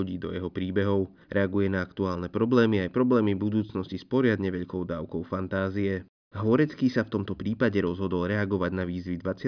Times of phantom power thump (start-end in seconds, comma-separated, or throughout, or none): none